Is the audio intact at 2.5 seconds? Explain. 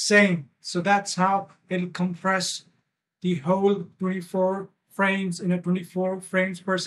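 Yes, the audio plays cleanly through 2.5 seconds with no dropout, click, distortion or other fault at that point.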